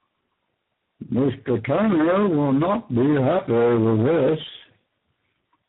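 The speech suffers from tandem speech coding throughout, sounding rough, muffled and warbly. The sound points to three successive speech coders, likely GSM full rate, G.729A and G.726, with G.711 links between them. Each coder re-encodes the previous one's degraded output, so the errors compound. On a spectrogram, energy stops sharply at 3.8 kHz, and the harmonics look smeared and blotchy rather than forming clean, continuous lines.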